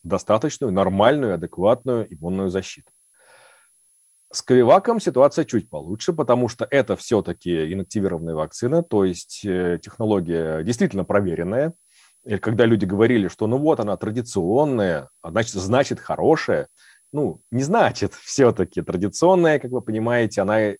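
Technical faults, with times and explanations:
Throughout, switching supply whistle: a faint high tone around 10 kHz wanders between 9.8 and 10.8 kHz, about 40 dB below the speech. A power supply is running in audible burst mode or beating with another supply.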